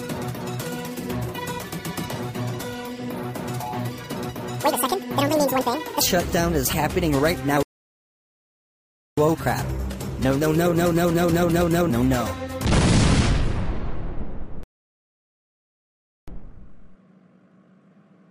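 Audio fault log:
0.00–6.01 s: section at the wrong speed. The audio runs 1.87 times too fast, lifting pitch roughly ten semitones, likely from playback against the wrong clock. On a spectrogram, harmonics sit higher and wider apart; the waveform's events are packed tighter until 6.01 s.
7.63–9.17 s and 14.63–16.28 s: playback stall. Output cuts to silence for 1.55 s, then 1.64 s, likely because the player ran out of data or its thread blocked. The waveform shows a flat line and the spectrogram a blank vertical band with abrupt edges.
9.17–12.17 s and 16.28–17.92 s: time-compressed catch-up. After each stall the player trims its backlog by cutting and cross-fading short pieces, so the audio hurries at 1.1× and then 2.0× while pitch stays put. Harmonics keep their height while events shorten, with splice seams.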